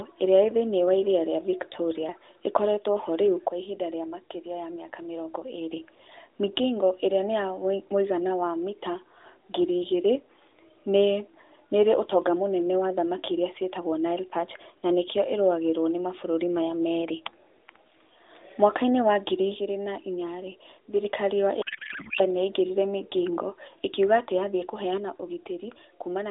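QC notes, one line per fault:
21.62–22.21 s, codec payload misread: the speech turns into garbled noise and warble that barely follows it. This fits octet-aligned AMR frames being unpacked as bandwidth-efficient, which puts every field in the wrong place.
24.98 s to the end, one channel drops out: the level falls abruptly by about 6 dB and stays down, likely because one stereo channel was lost before the mono sum.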